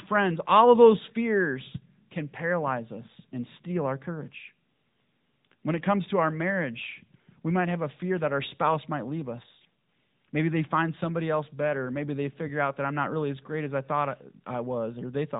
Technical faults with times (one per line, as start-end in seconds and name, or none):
0.00-15.39 AMR narrowband mobile codec